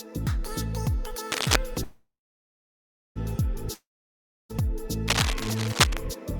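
From 1.31 to 1.56 s a dense, ragged scratching sits over the sound, a little louder than it, and a quieter rustle of similar character, about level with the sound, returns from 5.08 to 5.97 s. This is cable scratch noise, likely a worn lead or connector being moved.

At 1.83 s the sound smears into a fading buzz and then about 1.04 s of silence, resuming at 3.18 s exactly where it stopped. This call audio freeze most likely came from delayed packets draining the jitter buffer, adding a 1.32 s gap while losing nothing.

At 3.74 s a similar fading buzz gives way to about 0.65 s of silence, but when the sound returns at 4.63 s roughly 0.76 s of it is gone. That is a long network dropout, likely packets that never arrived.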